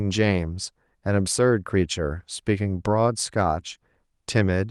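No technical faults are audible.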